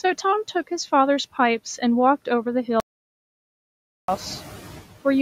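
From the start, you can hear noise suppressor artifacts: the suppressor pulls the steady background down by about 9 dB frame by frame, so the noise dips between phrases and swells back under the speech.

Then at 2.80 s there's an audio dropout to silence lasting until 4.08 s, about 1.28 s of dead silence with no room tone at all. The input was likely lost for that stretch, and when the sound returns mid-flow, the room noise sits noticeably higher.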